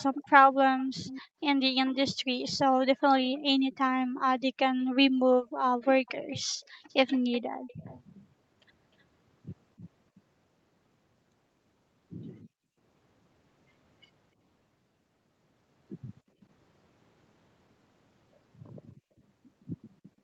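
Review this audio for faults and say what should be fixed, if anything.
Echo leak: from 0 to 10.21 s, a copy of the speech returns 281 ms late, roughly 20 dB down. Another faint one, about 30 dB down and 306 ms late, appears at 20.03 to 20.1 s. The likely cause is a far-end speakerphone whose echo canceller let residue through. Tune that canceller or use a headset.

Background gated by the echo canceller: the room sound drops out between 1.22 and 7.68 s, by up to about 37 dB and for around 1.5 s in total. It dips again at 12.44 to 12.78 s (about 33 dB) and between 16.25 and 19.1 s (about 19 dB). The canceller is clamping the microphone whenever the loudspeaker plays. Use gentler suppression or comfort noise to keep the background steady.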